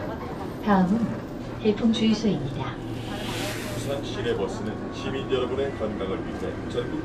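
No technical faults can be heard in this recording of sounds.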